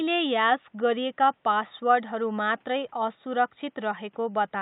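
No technical faults are audible in this speech recording; the only background is the room's own noise, sitting about 44 dB below the speech.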